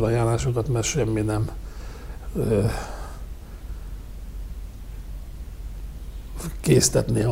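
No technical faults can be heard anywhere in the recording. Nothing in it points to a problem in how the sound was captured, processed or delivered.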